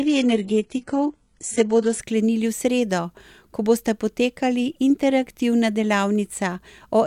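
The player opened on a low-bitrate version of an adaptive stream until 2.0 s, which points to roughly 12 kbit/s HE-AAC, so the speech has synthetic treble, nothing above 11.1 kHz, and stronger codec artefacts before it abruptly sharpens.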